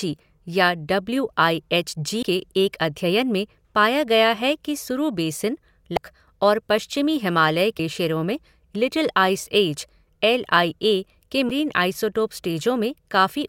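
Brief glitches break into the speech at 2.22, 5.97 and 7.79 s, with a longer blip from 11.47 to 11.51 s. These come from damaged data in a compressed stream: corrupted frames made the decoder lose sync until it found the next frame header.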